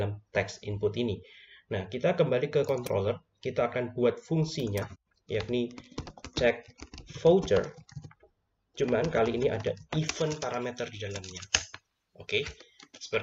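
From 10.08 s to the end, the sound turns thin and bright. This is pre-emphasis left on. A treble boost was applied upstream, and the matching de-emphasis on playback never happened. The shape fits the J.17 curve. At 10 kHz the level sits about 11 dB above its 1 kHz reference. Sibilant and hissy detail jumps forward. The low end seems to shrink by comparison. The tone stays harsh through the final seconds.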